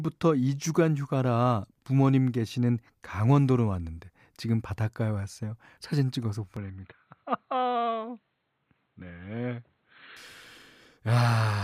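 From 6.57 to 10.17 s speech turns dull and boxy, nothing above 4.2 kHz, a bit quieter, with faint new noise: likely input switched to a poorer device.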